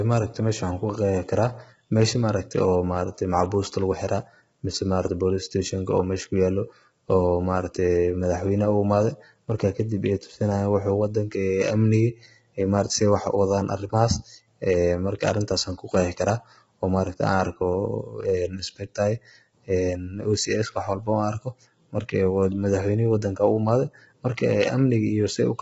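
Speech runs roughened and grainy for the whole clip, with noise filling the gaps between voice harmonics and nothing above 7.8 kHz, likely low-delay AAC compression such as AAC-ELD at a rate near 16 kbps.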